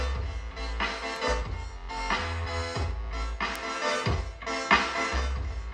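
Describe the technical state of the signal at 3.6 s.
A bit error spike sits at 3.56 s. For two consecutive samples a single flipped bit, corrupted in memory or on a digital link, shifted the stored value by a power of two before it snapped back to normal. Because the jump has nothing to do with the surrounding audio, it comes out as one sharp broadband tick, peaking at about -13 dBFS, with energy spread across the whole spectrum rather than following the sound around it.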